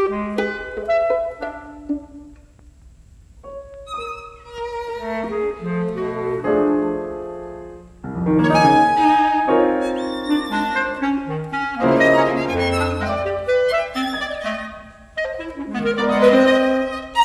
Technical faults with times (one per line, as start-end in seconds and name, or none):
none